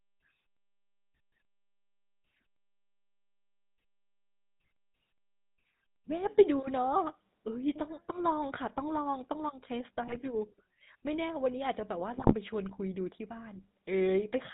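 A speech clip with a buzzy, gravelly roughness throughout and nothing audible above 4 kHz, the sound of the GSM full-rate codec, which fits its 13 kbps rate. It rebuilds the voice from a vocal-tract filter driven by sparse, regularly spaced pulses. That strips fine detail and leaves the speech coarse and band-limited. Two brief bursts of squawking, gargling distortion occur from 10.07 to 10.17 s and from 12.17 to 12.34 s. These are GSM bit errors: corrupted filter, pitch or gain values reaching the decoder bend the spectrum and jolt the level for a handful of frames.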